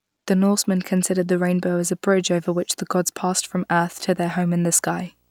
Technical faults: video or display buzz

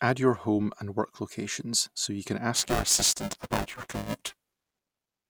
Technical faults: buffer tearing

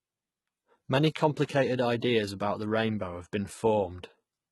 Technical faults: HE-AAC compression

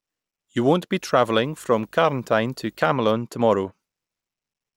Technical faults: video or display buzz

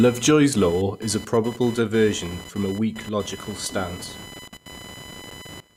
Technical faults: computer activity noise

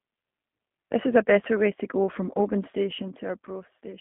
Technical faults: G.729 codec

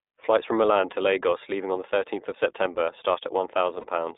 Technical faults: iLBC codec; lost iLBC frames

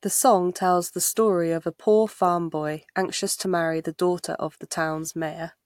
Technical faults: none

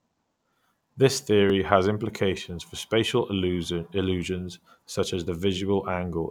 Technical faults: dropped buffer (overrun)

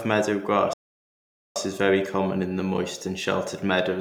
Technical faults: playback stall

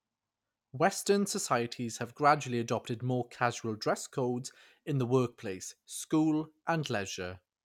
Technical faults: none

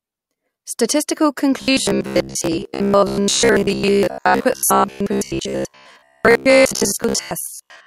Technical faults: robotic sound from repeated short buffers

